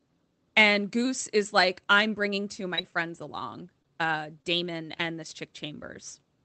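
At 2.75 s, just after "I'm bringing two of", a short concealed packet loss smears about 20 ms of speech as the decoder extends the last sound. At 2.81 s, 3.82 s and 4.42 s, the last after "along uh", short stalls from a late packet hold a sound roughly 20 ms too long while the buffer waits. Another short concealed packet loss at 4.98 s briefly wobbles the audio.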